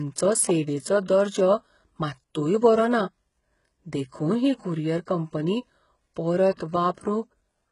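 From the start the speech carries heavy damage of the kind HE-AAC compression produces, which is the likely cause. The treble reaches high but sounds synthetic, with s sounds turning gritty and metallic. Only the lower band is properly coded, and the top is rebuilt by copying lower bands upward, so its harmonics fail to line up. The degree of damage fits a very low bitrate, around 12 kbps. A spectrogram shows a hard ceiling at 11.1 kHz and blocky, repeated texture above the crossover.

From 6.56 to 6.59 s there is pre-echo: a short hiss, about 32 ms long, runs ahead of a sharp onset and softens its attack. The codec spread its quantisation noise evenly across the block, so noise meant for the loud onset also filled the quiet stretch before it. On the waveform, low-level fuzz appears before the transient's leading edge. A spectrogram shows a broadband smear reaching backward from the attack.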